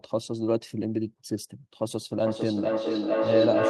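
From 2.21 s to the end, feedback echo between two devices: speech returns about every half second, building to about 2 dB above the original, seen as stacked, repeating spectrogram bands.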